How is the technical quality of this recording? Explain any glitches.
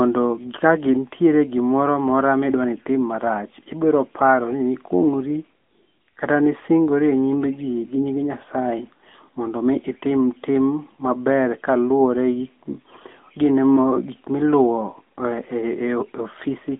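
The recording has been through a narrowband mobile link, and the coding damage is plainly audible for the whole clip.

AMR narrowband mobile codec, throughout: the speech is confined to a telephone band of about 150 Hz to 3.5 kHz, with nothing above 3.7 kHz, giving a thin, boxed-in quality. At this rate the codec rebuilds the voice from a vocal-tract model excited by sparse pulses per 5 ms subframe. That leaves a buzzy, synthetic edge, which points to a mid-rate mode around 10 kbps. A spectrogram shows a hard ceiling near 3.7 kHz with empty space above it and little energy below 150 Hz. Harmonics look smeared and grainy within each 20 ms frame.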